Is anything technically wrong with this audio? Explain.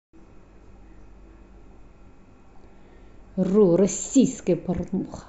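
No, there's no technical fault.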